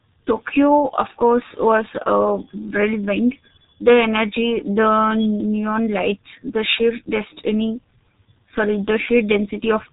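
From start to finish the speech sounds muffled and hoarse, with smeared consonants and a rough texture on vowels. Nothing reaches above about 3.8 kHz, so sibilants lose their edge. This is heavy G.723.1 codec damage: the encoder models the voice in 30 ms frames at a very low rate, consistent with roughly 6 kbit/s. That coarse, slowly updated model blurs fast articulation and discards the upper band entirely.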